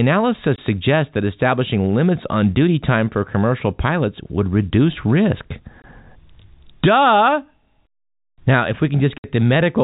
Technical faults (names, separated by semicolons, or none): packet loss filled with silence